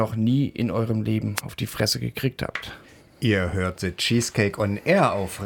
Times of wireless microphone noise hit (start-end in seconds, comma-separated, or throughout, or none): 1.35-1.41